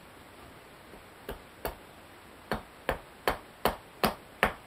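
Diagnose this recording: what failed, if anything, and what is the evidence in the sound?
Nothing in the signal chain has failed: the recording comes through intact, with no dropouts, clicks, distortion or timing disturbances anywhere in it.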